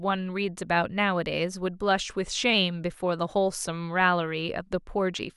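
From 2.01 to 2.54 s the speech suddenly sags: it plays about 5.2% slower and drops in pitch by roughly 93 cents, close to a full semitone. It holds there for about half a second, then snaps back to normal speed and pitch. This is a drift correction step. The likely cause is clock-matching software abruptly changing the playback rate to rebalance its buffer, which slows tempo and lowers pitch together.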